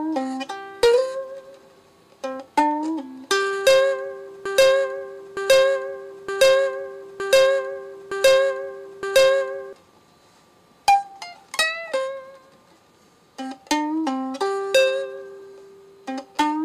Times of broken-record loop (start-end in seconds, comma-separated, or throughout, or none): 4.45-9.73